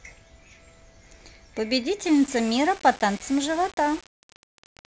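From 2.05 s to the end, the speech turns grainy and gritty, with quiet stretches sputtering or dropping out. This is low bit depth without dither: the signal was likely rounded to about 6 bits, so the error tracks the voice, sitting roughly 20 dB below it.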